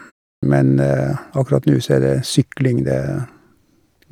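Clipped start after a pause at 0.38 s: after about 0.35 s of silence the output device was still waking, swallowing roughly 46 ms, so speech begins abruptly without its opening sounds.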